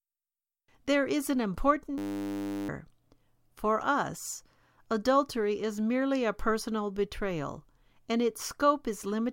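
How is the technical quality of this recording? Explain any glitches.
The recording has one glitch, a system hang loop, from 1.98 to 2.69 s, just after "is an". The computer or audio driver stalled, and the sound hardware kept replaying the same 10 ms stretch of its ring buffer, about seventy times in a row. Because that slice is so short, the repeats fuse into a steady 100 Hz buzz instead of a stutter, and roughly 0.7 s of real speech is lost under it.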